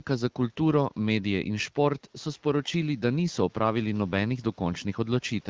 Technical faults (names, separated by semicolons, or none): none